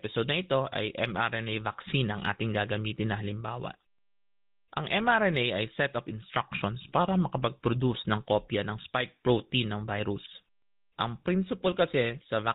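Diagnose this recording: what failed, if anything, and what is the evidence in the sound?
Codec stage: the GSM full-rate codec gives plainly audible buzzy, gravelly roughness throughout and nothing above 4 kHz, which fits 13 kbps pulse-excited vocal-tract coding.

Network stage: lost GSM frames at 8.82 to 8.85 s, after "ng kopya ng" and before "protein ng virus". A brief metallic ring comes from the last good frame being repeated, fitting a single lost frame.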